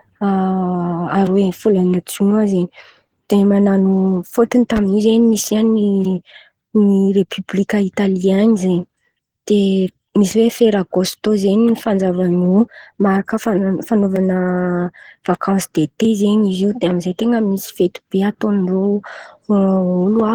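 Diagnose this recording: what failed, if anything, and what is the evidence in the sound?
Throughout the clip the speech sounds hoarse and muffled, with a rough, grainy texture, though the top end still reaches to about 20.2 kHz. The fault lies at the codec stage and is likely Opus compression. The low-bitrate hybrid mode codes the lower band as speech and fills the upper bands with folded or noise-like content, and this character suggests a rate of around 16 kbps.

Just after "man̈ano fôtony", from 4.77 to 4.80 s, a single loud pop sits on top of the speech, peaking at about 5 dB above the surrounding level, while the speech carries on underneath. The evidence points to the analogue wiring or driver stage. A brief voltage step, likely from a connector, static discharge or driver glitch, was added to the signal, and the following circuitry shaped it into this short, sharp transient.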